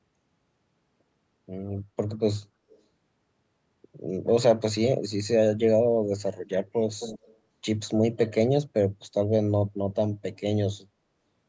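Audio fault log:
2.70–2.81 s and 6.92–7.34 s, echo leak: a delayed copy of the talker comes back, barely audible in the first short scrap but clear in the second, about 15 dB under the speech. Delays of 276 and 264 ms likely point to a far-end echo canceller letting loudspeaker pickup through.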